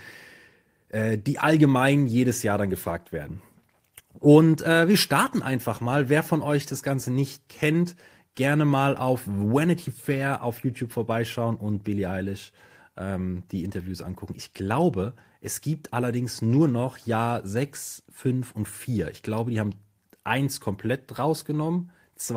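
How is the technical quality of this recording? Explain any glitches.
Nothing here needs explaining, since I can't hear a single glitch anywhere in the recording.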